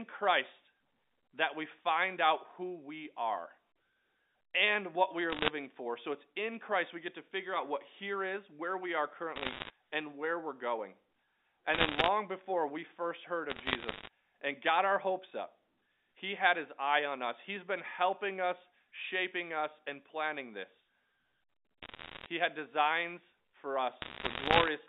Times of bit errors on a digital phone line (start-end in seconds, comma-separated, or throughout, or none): 5.30-5.48, 9.36-9.70, 11.74-12.08, 13.50-14.08, 21.82-22.26, 24.02-24.68